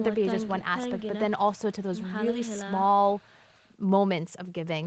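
No technical faults can be heard anywhere in this speech recording. It has the band-limited sound of a call path, with nothing above 8 kHz, which fits wideband Opus coding.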